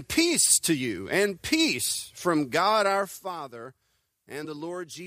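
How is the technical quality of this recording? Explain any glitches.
The recording has one audible glitch, a brief burst of damaged data in a compressed stream at about 0.56 s. For a moment the decoder was given corrupted bytes where a valid frame should have been. It misread or discarded that frame, lost its place in the bitstream and resynchronised at the next frame header. The result is a short chirp or blip lasting about 10 ms. On a waveform it shows as an abrupt discontinuity or spiky fragment. On a spectrogram it appears as a thin vertical smear of broadband energy breaking the surrounding pattern.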